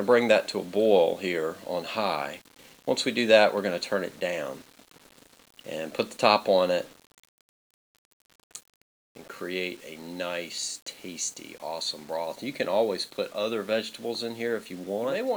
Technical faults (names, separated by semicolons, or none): low bit depth without dither